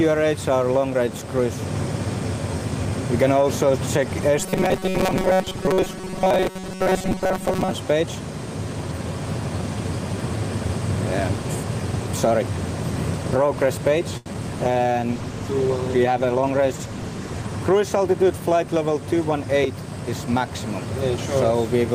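From 4.39 to 7.73 s the sound turns into a rigid, metallic buzz at 188 Hz, with most of the audio replaced by repeats. This is likely robotic sound from repeated short buffers, each about 5.3 ms long, while the real audio is skipped.

At 14.17 to 14.28 s one sound is held too long, for 84 ms. This is a short stall from a late packet: the jitter buffer ran dry and the receiver stretched the last sound until the packet arrived, so nothing was lost.

At 14.34 to 14.36 s there is a brief smear. This is short concealed packet loss: 20 ms never arrived, a 3 ms fill bridged the gap, and the delay shrank by roughly 15 ms.

From 14.59 to 17.54 s the audio sounds coarser and rougher. This is a call bitrate drop from 32 to 15 kbps, held at the lowest rate for 2.93 s as the encoder received fewer bits.

Within that stretch, from 16.28 to 16.73 s, the audio runs hurried at 107% speed with unchanged pitch. 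This is a jitter buffer speed-up, which trimmed roughly 40 ms of pitch periods to reduce the delay.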